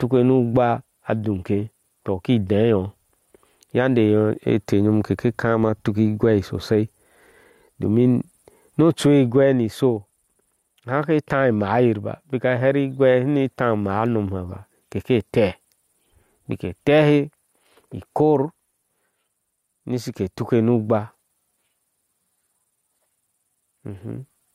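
Gain pumping runs through the whole speech recording: the gain is pulled down as soon as a loud syllable arrives and recovers in between, a swing of around 10 dB. The likely cause is input gain set far too high, with a fast limiter or compressor clamping down on each peak. The speech itself sounds squashed and flat in level.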